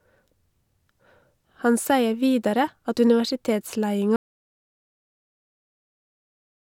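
At 4.16 s the speech cuts to total silence through to the end, an audio dropout to silence, likely from lost input while silence kept being written.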